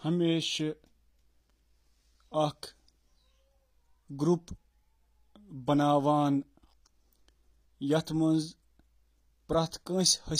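HE-AAC compression runs through the whole speech clip: the treble sounds bright but synthetic, with s sounds turning gritty and lispy. The likely cause is spectral band replication rebuilding the upper band from copied lower bands, which fits HE-AAC v2 at around 24 kbps.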